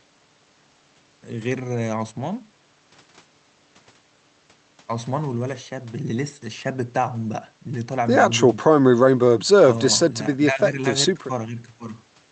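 No technical faults can be heard anywhere in the speech recording. The audio continues steadily with no interruption or disturbance at any point.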